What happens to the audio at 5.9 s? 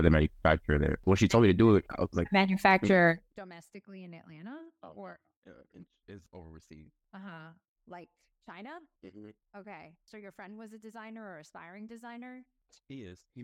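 Nothing goes wrong at 5.9 s: the speech carries on intact, with no dropout, glitch or distortion at that point.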